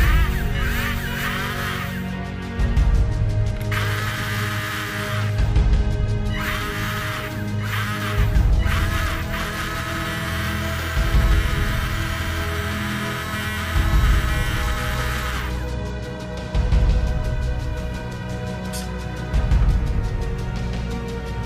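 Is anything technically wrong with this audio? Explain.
Yes, there are two separate problems. First, a Bluetooth SBC bit pool drop happens three times: 2.99 to 6.17 s, 8.63 to 9.86 s, and 14.56 to 16.03 s. The treble goes dull and a gritty grain creeps in, then clears each time. That fits the link squeezing SBC from bit pool 31 down to 16, around 110 kbps, so the top sub-bands starve and everything else gets coarsely quantised.

Second, there are periodic USB or driver dropouts from 12.02 to 20.0 s, one every 2.0 s, so about five in all. Each one skips a tiny sliver of audio, well under a millisecond, with nothing filled in. You hear it as a small regular tick on the beat of that 2-second cycle, the kind you get when a background task briefly blocks the bus or audio driver.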